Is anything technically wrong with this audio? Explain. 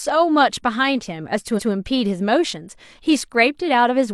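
Yes, there's one glitch: repeated frames from 1.54 to 1.68 s. That roughly 139 ms stretch of speech gets played twice, so you hear a quick stutter, and the clip runs about 139 ms longer. It fits a run of about three compressed frames being sent twice, with the decoder simply playing them again.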